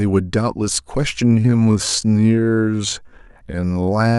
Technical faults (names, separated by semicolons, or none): time-stretched section